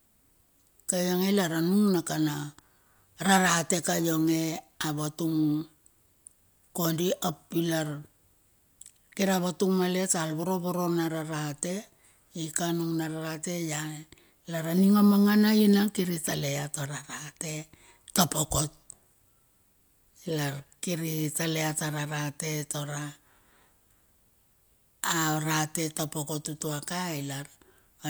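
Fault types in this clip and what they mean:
No fault types can be heard in this clip.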